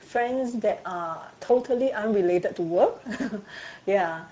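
From the start, the speech carries Speex codec damage. It is plainly audible. Speex is a CELP coder, and at this setting it has few bits for the excitation signal. The result is a hoarse, noisy texture. The top of the band is not real detail. It is a shaped, hissy fill. The coarseness fits a middle quality setting near 17 kbps.

At 1.45 s comes VoIP packet loss concealed by the speech codec. It lasts to 1.51 s. About 40 ms of audio never arrived, which fits two lost 20 ms frames. The decoder filled the gap by repeating its last pitch and filter at falling gain, so the sound fades out. The speech sounds weak and distorted for a moment after 1.51 s, as the decoder recovers frame by frame.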